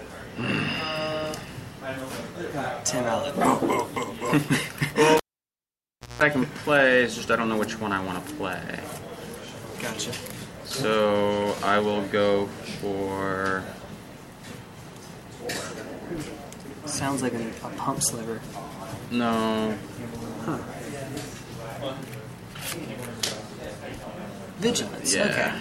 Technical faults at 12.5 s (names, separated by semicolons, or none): none